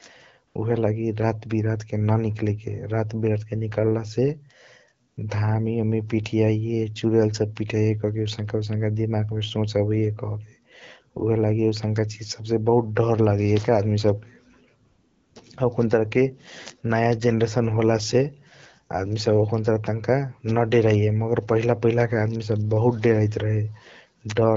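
At 0.47–0.55 s, 5.07–5.17 s and 14.85–15.35 s, AMR comfort noise takes over the pauses for 80, 100 and 500 ms: the real background drops out and a smooth, steady synthetic hiss is substituted. Unlike a noise gate, the gap never goes silent.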